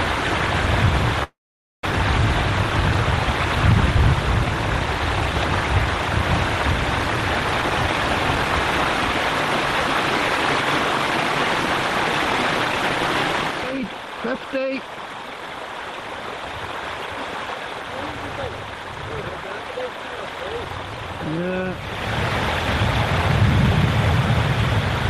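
From 1.23 to 1.84 s there is a call audio freeze. The sound stops moving forward, a brief buzzy continuation of the last moment trails off, and about half a second of silence follows before the audio resumes exactly where it broke off. The likely cause is delayed packets draining the jitter buffer. Nothing is lost, but everything afterward runs about 0.6 s later. A spectrogram shows a smeared, fading band and then a blank column. The waveform shows a flat stretch.

Jitter buffer speed-up follows in five bursts: 8.35–8.86 s, 9.33–10.12 s, 10.65–11.25 s, 12.04–13.08 s and 13.52–16.46 s. Each runs at 105 to 110 percent speed. The receiver works off its surplus by cutting out tiny pitch-period slices, about 50 to 100 milliseconds per burst and roughly a third of a second in the longest. The pitch holds steady while the pacing sounds rushed. On a spectrogram, features are compressed horizontally with unchanged frequencies. 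The waveform shows periodic cycles at unchanged spacing, with some whole cycles dropped out.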